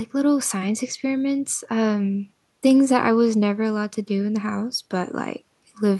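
A short speech recording, and nothing is technically wrong with it.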